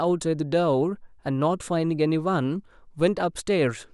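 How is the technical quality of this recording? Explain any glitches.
One glitch stands out, a DC step at 3.00 s. The waveform's zero line jumps abruptly by about -38 dBFS, as when a converter recalibrates or an offset input is switched in, then drifts back as a 2 Hz high-pass bleeds it away. It's heard as a low thump under the speech, which carries on unchanged. On the waveform the whole trace lifts off centre and slowly sags back. A spectrogram shows a brief broadband vertical line at the step, with energy concentrated at the very bottom.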